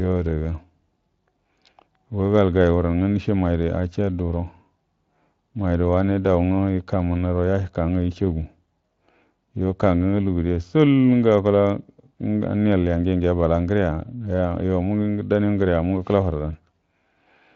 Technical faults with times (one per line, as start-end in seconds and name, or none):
none